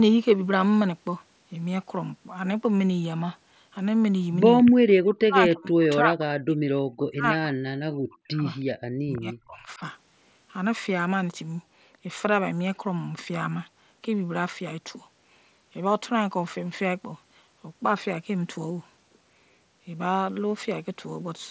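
Three times the talker gets swallowed: from 4.92 to 6.64 s, 6.97 to 8.43 s, and 9.0 to 9.81 s, with the first two dipping hardest, roughly 40 dB down, and the last a bit shallower. It's likely speech suppressed in double talk, with the echo canceller mistaking the near talker for loudspeaker echo while the far side spoke, so it clamped everything. The top end stopping at 8 kHz fits the mSBC headset link.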